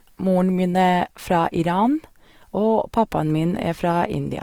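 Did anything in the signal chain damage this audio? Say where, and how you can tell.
Yes, at the codec stage, throughout the speech: the damage is plainly audible, with grainy, rough texture in place of clean detail while the band stays full, reaching about 20.3 kHz. That points to likely Opus compression in its CELT mode, noise-filling starved bands at roughly 24 kbps.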